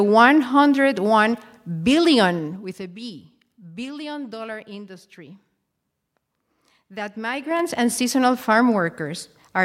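Speech clip with zipper noise at two points. From 2.30 to 2.90 s the level falls by roughly 15 dB in steps of about 2 dB, and from 7.34 to 7.68 s it rises by a similar amount in steps of about 4 dB, both at around ten steps per second. The gain jumps between values instead of being smoothed, so each step leaves a small click, heard as a ticking that rides on the speech while the level moves.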